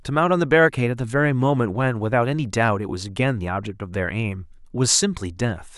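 No technical faults are audible anywhere in the speech recording.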